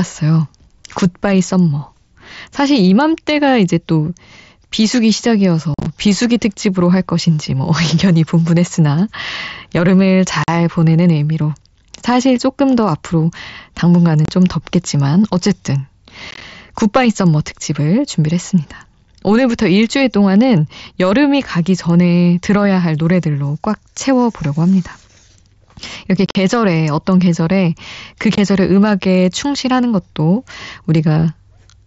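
Unconcealed Bluetooth headset packet loss cuts the speech at 5.74, 10.44, 14.25, 16.31, 26.26 and 28.35 s. Short voice packets from the headset went missing. Silence or an idle pattern filled each gap, leaving hard-edged holes. At 5.74, 16.31 and 26.26 s the gaps cluster into brief chopping.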